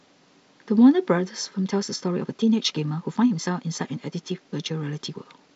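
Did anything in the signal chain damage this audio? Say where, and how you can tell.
Yes. From 1.52 s to the end, the speech suddenly runs about 1.5 times faster at unchanged pitch, sounding rushed. This is a time-stretched section, likely from software processing.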